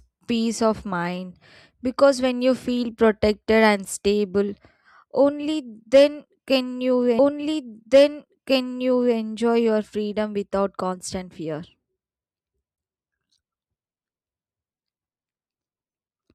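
At 7.18 s, just after "only then can you", a small blip marks a jump back, and about 2.0 s of speech plays a second time until 9.17 s, before "your freedom without constant". This is a stream segment repeated: the player fetched or queued the same segment twice.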